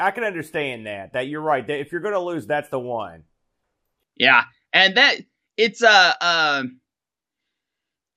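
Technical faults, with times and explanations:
3.63–3.87 s, DAB burbling, just after "lose that's the one": residual bit errors corrupt MP2 sub-band levels; spectrogram shows blocky, flickering frequency patches.
7.39–7.73 s, DAB burbling: about 0.34 s of corrupted frames makes individual sub-bands jump; spectrogram shows isolated rectangular bursts per frame.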